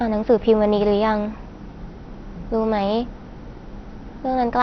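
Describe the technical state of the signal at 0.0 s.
Right at 0.0 s the speech already has MP2 compression damage, and it runs through the whole clip. Nothing comes through above about 6.1 kHz, so it sounds dull, with a gurgly, granular edge. That's likely Layer II starved of bits, fitting a rate around 48 kbps, shutting off upper sub-bands and coarsely quantising the rest.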